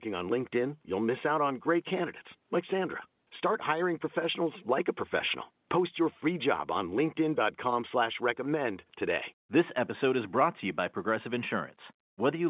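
Nothing stood out on listening to this speech recording, which carries the narrow, telephone-band character expected of its mu-law G.711 coding.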